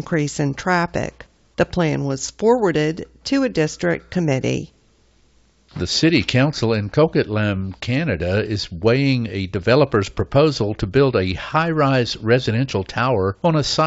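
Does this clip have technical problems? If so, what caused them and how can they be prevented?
Yes. From 7.56 to 7.63 s the speech breaks into a short, rough crackling burst with a pop and a brief jump in level. These are bit errors on an ADPCM link, here the G.722 wideband path. Flipped bits also throw off the decoder's step size and predictor, so each error rings on as a smear rather than a single click. To prevent it, protect the link with error detection and concealment, or improve the radio or line conditions that are corrupting the bits.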